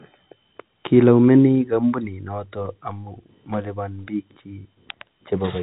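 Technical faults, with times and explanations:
No technical faults, so there are no times or explanations to give.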